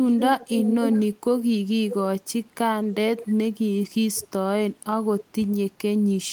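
Echo leak runs from 0.06 to 1.15 s, with a fairly loud copy of the speech trailing 0.52 s behind. Fainter scraps follow at 2.88–2.92, 3.17–3.28, 4.15–4.28 and 5.18–5.25 s. It's likely a speakerphone's echo canceller letting its loudspeaker leak back.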